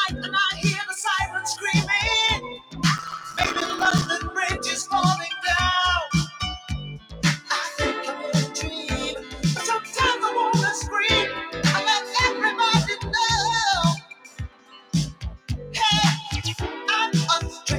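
Throughout, the sound pumps and thins as sustained parts sink and attacks punch through, with level swinging by roughly 10 dB. This is a noise suppressor applied to music or sounds: a speech-tuned suppressor mistakes steady tones and tails for noise and pulls them down.

Sharper dips, each a sound cut by the noise suppressor, fall at 0.13–0.3 s (about 6 dB) and 2.37–2.83 s (about 16 dB). Here the suppressor judged a held or fading passage to be noise and clamped it below its surroundings.

From 2.98 to 4.07 s a gritty crackle tears across the sound, made of dozens of tiny silent gaps. This is processor overload crackle: the processor kept missing its deadlines and left silence each time, which fits a buffer of about 5 ms.

More suppressor cuts follow at 6.27–6.71 s (about 10 dB), 6.99–7.5 s (about 16 dB), 9.21–9.44 s (about 6 dB), 13.97–14.94 s (about 18 dB), 15.12–15.5 s (about 18 dB) and 17.5–17.66 s (about 10 dB). 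In each, decays are shortened or sustained sound drops away.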